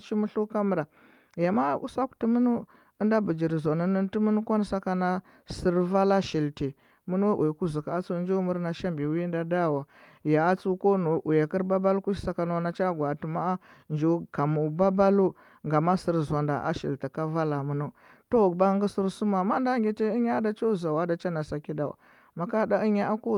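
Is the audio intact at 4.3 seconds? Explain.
Yes, the speech runs through 4.3 seconds without any dropout, click, distortion or other audible fault at that point.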